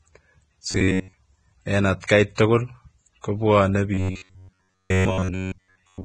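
The whole speech clip has a hissy, grainy top, likely Vorbis compression at a low bitrate, around 22 kbps. From 0.71 to 1.18 s the voice goes to a rigid metallic buzz at 93.8 Hz: likely robotic sound from repeated short buffers, each repeat about 10.7 ms long, with most of the audio repeated. Pre-echo puts a short hiss ahead of attacks at 2.07 s (21 ms) and 2.35 s (30 ms). The robotic buzz returns from 3.94 s to the end.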